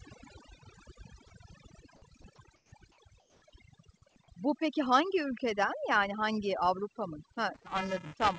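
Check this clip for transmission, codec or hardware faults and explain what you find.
Four problems stand out in this speech clip, one of them running the whole way through. The call path itself sounds like a wideband codec such as G.722, with nothing above about 8 kHz, but that's just the band limit and not a fault.

Overdone noise removal is present from start to finish. The noise reducer was pushed too hard, so any frequency band sitting close to its noise estimate gets pulled way down or switched off, and the quieter bits of the voice get dragged down with it. You hear the background drop and break up into little twinkling specks.

Sound dropped by the voice detector hits twice, as two brief gaps of about 20 ms each, at 1.28 s and 2.22 s. The sender's voice detector likely mistook the sound for background and stopped sending for a moment, and the receiver patched in comfort noise instead. 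Each one is a tiny hole where the voice gives way to flat noise before snapping back.

Comfort noise in place of the background shows up from 2.56 to 2.72 s and again from 3.20 to 3.42 s. During those pauses the sender likely went into discontinuous transmission, and the receiver filled the gap with synthetic noise roughly matched to the background. The real background, which sits about 36 and about 40 dB below the loud parts respectively, gets swapped for a smooth, featureless hiss that is about 5 dB quieter in the first stretch and about 2 dB quieter in the second.

Buffer tearing starts at 7.54 s and runs to the end. The program writing the ring buffer and the hardware reading it have drifted until they cross inside every period, so roughly a tenth of each buffer holds audio from about 7 ms earlier, with hard joins on both sides. That gives a robotic 375 Hz buzz riding on the voice, which fits a 128-sample buffer at 48 kHz.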